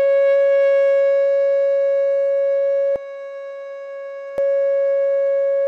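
From 2.96 to 4.38 s, channel delay causes comb filtering: one side lags by around 10 ms, cutting evenly spaced notches from near 40 Hz and leaving the music hollow and phasey.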